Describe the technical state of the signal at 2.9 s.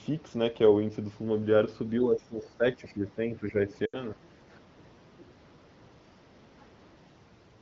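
Speech suppressed in double talk covers 2.06 to 3.2 s. The speech dips and thins in patches totalling roughly 0.7 s, at its deepest about 10 dB down. This is likely an echo canceller that, facing both sides at once, turned everything down.

The other side's voice leaking through sits at 2.86 to 2.93 s, a brief, faint scrap around 30 dB below the speech. It is likely far-end loudspeaker sound that the echo canceller failed to fully remove from the microphone pickup.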